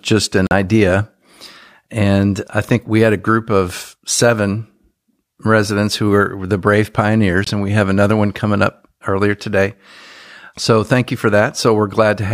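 At 0.47 s and 7.44 s the speech drops to silence for 43 ms and 21 ms, likely a Bluetooth dropout. It resumes further along rather than picking up where it stopped, as a buffer stall would.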